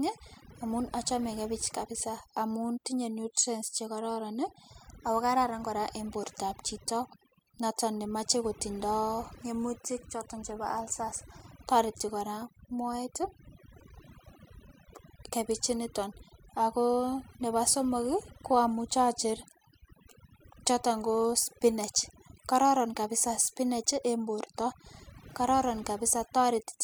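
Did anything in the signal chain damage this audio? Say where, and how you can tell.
Yes, there's overdone noise removal running through the whole clip, so I'd put it at the call processing stage, in the noise suppressor. The giveaway is that the gaps between phrases drop to near silence with little twinkling specks left behind. The suppressor was set far too aggressive: any frequency band sitting close to its noise estimate gets pushed right down, and the quieter parts of the speech get pulled out with the noise.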